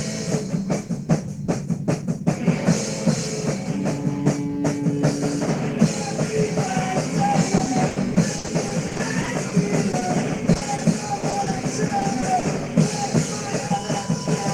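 From 7.57 to 9.53 s there is repeated packet loss, which gives a robotic sound. Short stretches of audio keep going missing, the longest about 60 ms. Each hole is patched by extending the preceding sound, so the audio turns choppy, with pieces missing. On a spectrogram this shows as smeared, repeated vertical blocks.

Two brief instances of short concealed packet loss follow, at 9.91 to 9.95 s and 9.99 to 10.03 s. Each drops about 20 ms, which the receiver fills by continuing the last sound before blending back. Each is heard as a tiny smear or wobble, and the waveform shows a short, overly smooth patch.

The robotic repeated packet loss then returns from 10.53 to 10.80 s, where holes of up to 40 ms leave a third of the span concealed. It comes back again from 11.20 to 12.44 s with shorter 20 ms holes. Both stretches sound stuttery and choppy, and the spectrogram shows frequent small smeared discontinuities.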